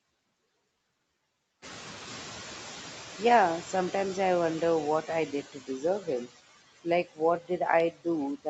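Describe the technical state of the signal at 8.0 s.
At 8.0 s the speech falls inside a stretch, from 7.91 to 8.06 s, where the noise suppressor has cut the speech. It misjudged this part of the signal as background and pulled it down by up to about 13 dB, for roughly a tenth of a second in total. The sound there is swallowed and faint. On a waveform the envelope visibly shrinks over about 100 ms of that stretch, and on a spectrogram the speech energy thins out abruptly.

Underneath this are the noise suppressor artifacts that run through the whole clip. The suppressor lowers bands it judges to be steady noise by about 17 dB, frame by frame, so the residual background around 8.0 s sinks and resurfaces with the speech. On a spectrogram this looks like a patchy, speckled noise floor that switches between frames rather than lying as an even haze, all below the 8 kHz ceiling of the call path.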